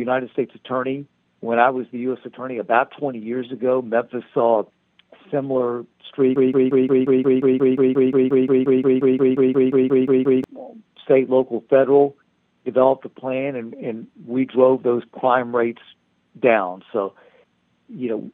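From 6.36 to 10.44 s a 177 ms fragment repeats 23 times back to back, a broken-record loop, likely from a stalled player resending its last buffer.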